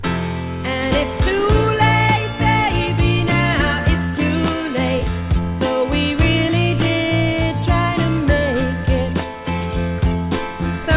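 No dropouts, distortion, noise bursts or timing errors turn up anywhere in the audio.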